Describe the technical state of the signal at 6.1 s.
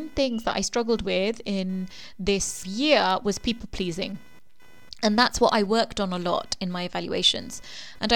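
At 6.1 s the speech carries computer activity noise, which runs through the whole clip rather than starting or stopping near this moment. Changing load in the computer's processor, graphics card or mouse shifts the ground shared with the audio circuit. Those shifts leak into the signal. Here they form a buzzy, chirping pulse train repeating around 500 times a second. It sits roughly 30 dB below the speech. It follows the machine's activity, not the talker.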